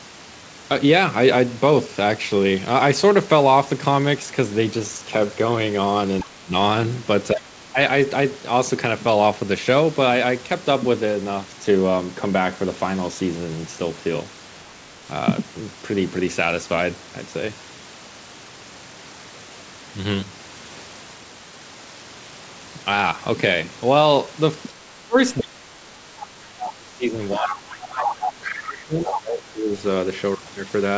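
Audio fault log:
6.2–6.26, 25.37–25.45, 27.42–27.58, 28.0–28.59 and 29.01–29.2 s: other side's voice leaking through. Scraps of a second voice rise from about 20 dB to about 5 dB below the speech, likely loudspeaker echo the canceller left behind; on a spectrogram they are detached harmonic fragments.
6.23–6.53, 7.33–7.77 and 24.79–29.7 s: speech suppressed in double talk. The voice dips by up to about 25 dB, for roughly 4 s in the last stretch, likely because the echo canceller turned everything down while both sides talked; the waveform shows sudden troughs, and the spectrogram shows thinned, gapped harmonics.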